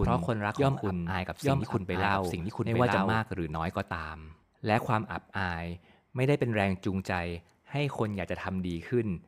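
From the first moment until 3.2 s the speech has a doubled audio track: a second, full-band copy runs about a second behind the first and is roughly as loud. It likely comes from a slower capture path or an edit that left two copies out of step. Unlike an echo or reverberation, the copy has no decay and no room colour. It stays at the same strength, then stops abruptly at 3.2 s.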